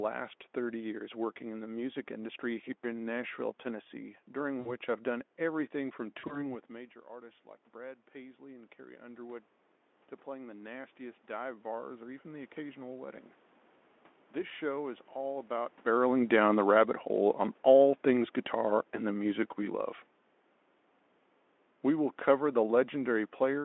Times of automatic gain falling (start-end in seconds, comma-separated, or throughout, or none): 15.86-19.88